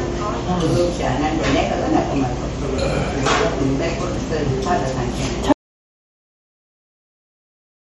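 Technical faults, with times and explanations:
Throughout: MP3 compression. The sound has a watery, swirling texture, and nothing remains above about 11.7 kHz, so the top octave is simply missing. The damage is plainly audible and fits a low bitrate of around 41 kbps. The likely cause is an MP3 encoder starved of bits: it removed the treble at a fixed point and dropped weaker frequency components, which flicker in and out from frame to frame.
5.52 s to the end: audio dropout to silence. The sound stops abruptly in mid-flow and is replaced by silence with no background or room tone left, and it does not come back. A gap that clean points to the input signal being lost, likely through a disconnected source, a failed link or a mute, while recording carried on writing silence. Whatever occurred after the cut is absent from the file.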